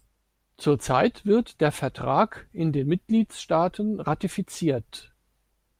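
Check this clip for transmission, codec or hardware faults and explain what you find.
Nothing stood out on listening to this speech recording.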